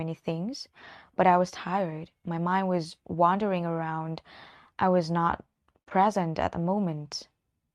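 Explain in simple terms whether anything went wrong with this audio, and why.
Right after "around I was not", at about 5.82 s, there's a short stall from a late packet. A piece of audio arrived late, so the player stretched the last sound for roughly 40 ms until it caught up. Nothing's lost, just a brief held moment with a slight buzz or dip.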